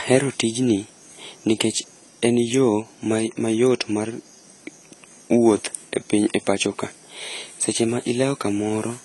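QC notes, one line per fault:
Throughout: AAC compression. The speech has nothing above 11.5 kHz, so it sounds dull and closed-in, and the codec damage is plainly audible as a smeared, warbling texture, with sibilants turning fizzy. The likely cause is AAC-LC coding at a bitrate around 32 kbps. At that rate the encoder lowers its cut-off and quantises the remaining frequency lines coarsely against its hearing model, leaving gaps that smear detail across each frame.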